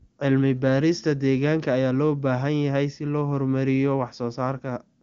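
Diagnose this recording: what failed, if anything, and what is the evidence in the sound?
Nothing failed in this recording, and the sound gives no evidence of a fault; its top end stops around 7.6 kHz, which fits a wideband phone codec running at a high rate.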